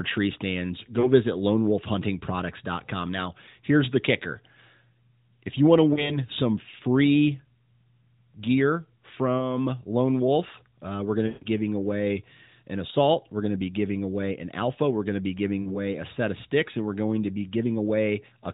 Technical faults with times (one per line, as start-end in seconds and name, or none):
1.00-1.09 lost AMR speech frames
5.94-6.19 lost AMR speech frames
9.38-9.56 lost AMR speech frames
11.28-11.47 lost AMR speech frames
15.62-15.76 lost AMR speech frames